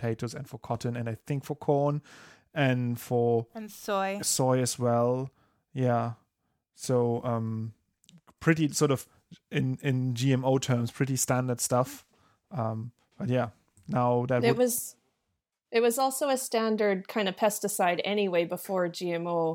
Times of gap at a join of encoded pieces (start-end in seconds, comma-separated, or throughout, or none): none